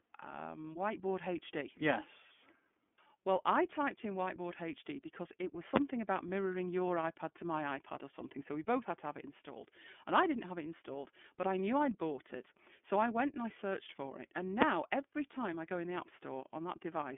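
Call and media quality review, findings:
iLBC codec, throughout. Speech is band-limited, with nothing above about 3.6 kHz and a line band of roughly 200 Hz to 3.4 kHz. It sounds plainly rough and synthetic. This fits the 13.33 kbps iLBC mode with 30 ms frames. Each frame's excitation is coded independently, so the waveform is only approximated and the grit stays audible.

Invalid numbers at full scale, 14.62 s, just before "every time I go". A single loud bang. A calculation produced infinite or invalid values, and these were clamped to maximum amplitude for one 5.33 ms block, which fits a 256-sample processing block. The block is too short to hear separate start and end pops, so it lands as one hit.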